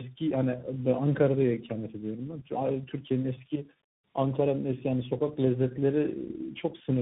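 Throughout, tandem speech coding: three speech codecs in a row each recode the last one's damage, stacking roughness and warble beyond any single codec, with nothing above 3.8 kHz.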